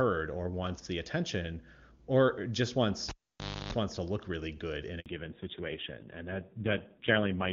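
A speech recording carried over an HD Voice call, with three separate faults. From 3.09 to 3.73 s, right after "the attention or just" and before "wants to look really", a cable is pulled and plugged in again. A pop opens a near-silent stretch of about 590 ms, which includes roughly 310 ms of 50 Hz mains buzz as the plug tip makes partial contact, then a second pop as the sound returns. The buzz and the paired clicks set this apart from a network dropout, which would leave only silence with no hum. At 5.00 s, after "look really good in", there is a 60 ms handover gap. The call switches to a different network and no speech frames arrive during that moment, so the sound dies out quickly and leaves clean silence until 5.06 s. Unlike packet-loss concealment, nothing is smeared or repeated across the hole. From 5.06 s to the end comes a fallback to narrowband. Before it, the AMR-WB wideband codec at 23.85 kbit/s carries the sound cleanly. 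After it, AMR-NB at 5.9 kbit/s takes over, and nothing above 4 kHz remains. The sound turns duller and rougher. Because the drop begins exactly at the handover and brings coding roughness as well as lost treble, it reads as a codec switch, not as a simple low-pass filter.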